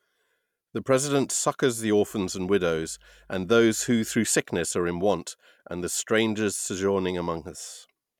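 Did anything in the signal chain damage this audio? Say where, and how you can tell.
Yes. Mains hum runs from 2.07 s to 4.25 s, starting just after "president succours the" and clearing before "sickness are in want". It is a steady low tone at 50 Hz sitting roughly 35 dB below the speech, with its low harmonics. The damage points to the analogue wiring stage: a ground loop or a nearby transformer coupled the power line into the signal path, and the hum stops when that coupling is broken.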